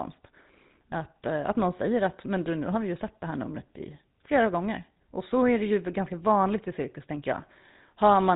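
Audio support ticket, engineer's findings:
GSM full-rate codec artefacts throughout. Buzzy, gravelly roughness, plainly audible. Spectrogram: hard ceiling near 3.8 kHz, nothing above; harmonics smeared by coarse pulse-train excitation. Consistent with a 13 kbps vocal-tract model on a telephony leg.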